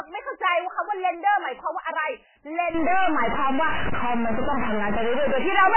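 A speech recording carries heavy MP3 compression damage from start to finish, likely from encoding at a very low bitrate, with the sound pointing to something around 8 kbps. Nothing survives above 3 kHz, so the speech is dull and boxy, and the thin remaining detail swirls and burbles as weak frequency components drop in and out between frames. On a spectrogram this shows as a hard flat ceiling at 3 kHz, with patchy, blocky energy below it that flickers from frame to frame. From 2.74 s to the end, a distortion rides on everything, the kind a stuck bit produces when one data bit is held fixed, likely by a faulty line or converter. Many sample values are pushed off by that bit's fixed weight, so the waveform turns jagged and stepped, and the quieter stretches fill with noise instead of falling silent. On the spectrogram, hash spreads across the band, including the gaps between utterances.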